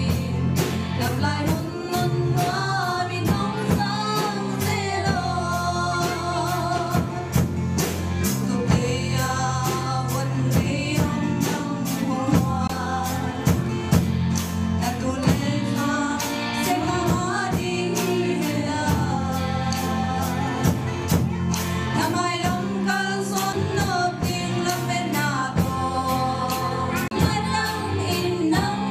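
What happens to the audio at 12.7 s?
A short tick and a near-silent gap of about 20 ms, from 12.67 to 12.69 s, after which the audio resumes from a different point. This is a CD skip: the laser lost its track and landed on another turn of the disc's spiral.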